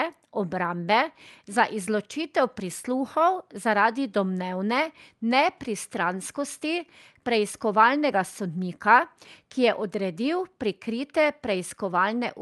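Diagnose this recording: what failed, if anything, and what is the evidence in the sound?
Nothing failed in this recording.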